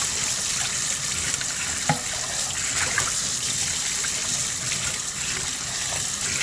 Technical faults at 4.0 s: none

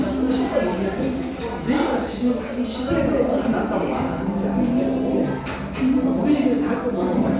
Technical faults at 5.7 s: none

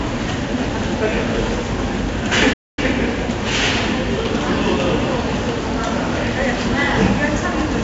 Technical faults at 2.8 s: 4-bit ADPCM compression; playback stall

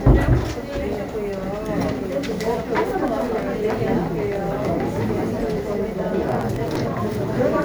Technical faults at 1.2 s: none

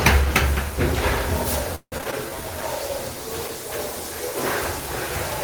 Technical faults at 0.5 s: none

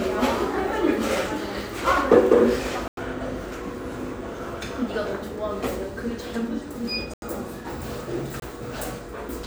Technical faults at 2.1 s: none

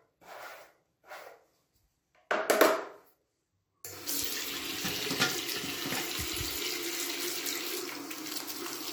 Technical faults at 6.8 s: none

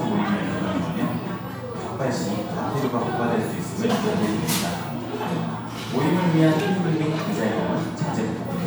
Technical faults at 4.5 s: none

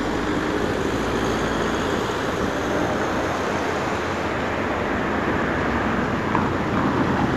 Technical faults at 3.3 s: none

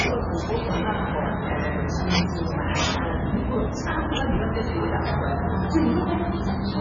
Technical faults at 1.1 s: MP3 compression

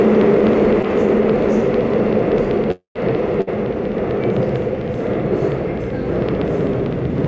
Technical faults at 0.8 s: periodic USB or driver dropouts; short concealed packet loss

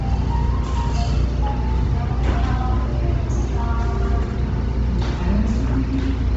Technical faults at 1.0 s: Bluetooth LC3 compression

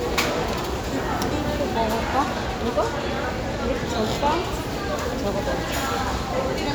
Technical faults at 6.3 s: none

